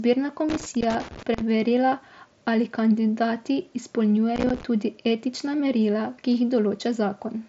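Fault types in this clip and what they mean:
Loose connector crackle: a worn or dirty contact in the signal path keeps making and breaking, chopping the speech, heard as irregular scratchy bursts from 0.49 to 1.41 s and again from 4.36 to 4.63 s, just before "tudi etična". On a waveform these stretches show jagged spikes and brief dropouts. A spectrogram shows scattered vertical broadband streaks cutting across the speech, up to the 7.7 kHz ceiling of the mSBC headset link.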